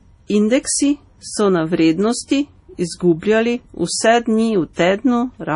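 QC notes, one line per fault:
Throughout, MP3 compression: likely a bit-starved encoder, fitting 32 kbps, cut everything above 10.6 kHz and zeroed weak lines, so speech sounds dull and watery.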